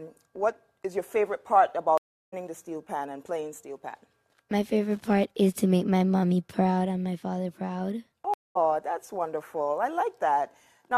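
At 1.98 s the audio stops for about 347 ms, resuming at 2.34 s, and at 8.34 s it stops again for about 216 ms, resuming at 8.57 s. Both are stream reconnects: the connection dropped, the player fell silent, reconnected and restarted its decoder mid-stream, with the first frame fading back in. Unlike a plain dropout, the sound does not pick up where it left off. It jumps ahead, skipping roughly 0.4 s the first time and about 0.15 s the second.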